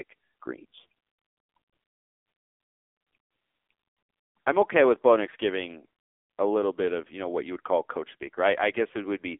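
Throughout, the speech sounds thin, buzzy and synthetic, with nothing above 3.5 kHz and little below 250 Hz. That is the AMR narrowband mobile codec: heavy damage from rebuilding the voice from a coarse vocal-tract model at a low bitrate, which fits roughly 6.7 kbps.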